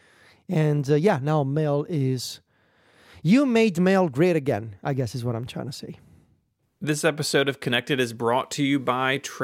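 Nothing in this recording of speech stands out as a technical fault at any point, so there's nothing to flag here.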